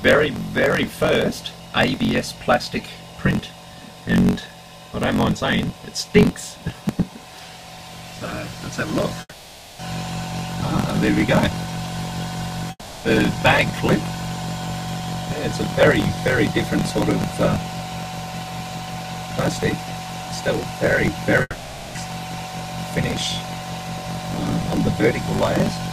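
Block size mismatch (truncated) runs through the whole clip. A buzz sits at 46.9 Hz and the audio plays 1.12 times fast at near-normal pitch. One stage appears to write longer blocks than the next reads, which fits a 1024-sample read block, and each block's tail is discarded.

At 9.20 to 9.81 s, 12.71 to 13.06 s and 21.42 to 21.97 s, the last sound carries on as a fading buzz or hiss. A brief silence follows, and the audio resumes further on with a stretch skipped. This is likely a long network dropout.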